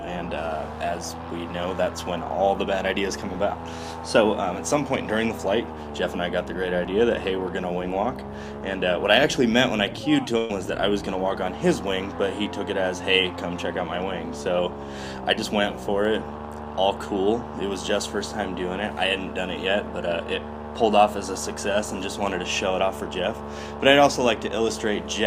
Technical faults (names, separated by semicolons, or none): burst of packet loss